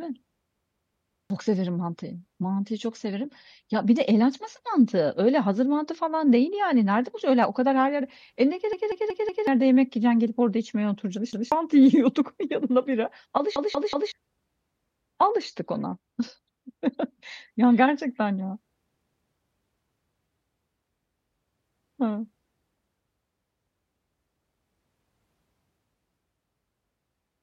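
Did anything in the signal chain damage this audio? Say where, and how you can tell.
Yes: repeated buffer at 0.56–1.30 s (before "severim mantıyı"), 8.73–9.47 s, 11.33–11.52 s (between "gidip orada içmeye oturacaksın" and "yiyorduk yanına bira"), 13.56–14.12 s and 18.95–19.32 s (after "gerçekten ya"). This is a driver or buffer fault. New audio arrived late, so the device replayed its last block of about 186 ms, which fits an 8192-sample buffer. Each block stutters one to four extra times with hard joins, replacing roughly 0.2 to 0.7 s of speech per event.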